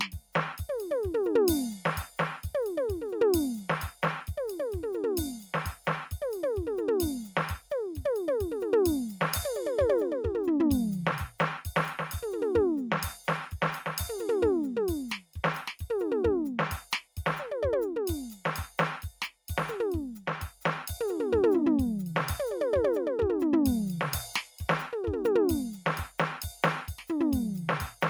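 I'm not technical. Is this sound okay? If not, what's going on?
No. A noise suppressor built for speech was left on this music, so held notes and fading tails keep getting pulled down while sharp hits pass, so the sound pumps, flutters or thins out. In three spots the suppressor cut the sound harder, mistaking it for noise: around 0.17 to 0.35 s, 16.84 to 17.17 s and 19.12 to 19.49 s, where it briefly dips noticeably quieter.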